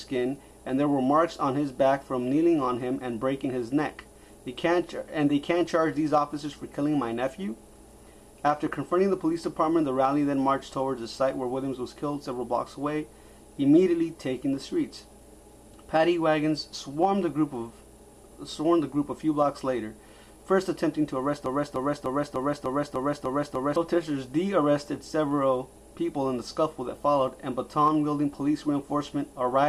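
At 21.46 s a broken-record loop begins. A 0.3 s fragment repeats eight times until 23.76 s. The playback likely stalled, replaying its last buffer.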